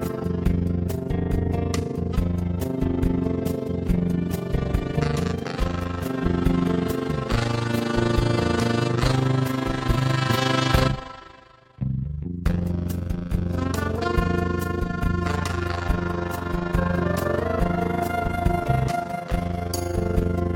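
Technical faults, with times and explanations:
Throughout, overlap-add ripple: the level swells and dips by about 11 dB around thirty times a second, a rough robotic flutter. The frames were windowed and rejoined with an overlap whose gains don't sum evenly, so loudness pulses once per frame.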